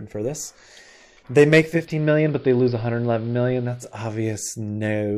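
From 1.58 s the sound dulls over about half a second as the treble is lost, and a faint hiss, roughly 35 dB below the signal, rises underneath while the level holds steady. At 4.06 s it returns to full bandwidth. This is digital radio blending to analogue: the receiver lost its digital stream and cross-faded, over about 0.47 s, to the station's band-limited AM broadcast, then faded back once the digital signal returned.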